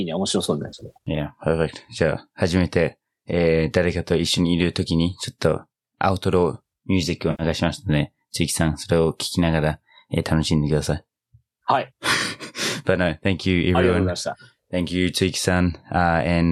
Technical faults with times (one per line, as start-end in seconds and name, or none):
0.68-0.97 AAC frame loss with concealment
7.30-7.42 AAC frame loss with concealment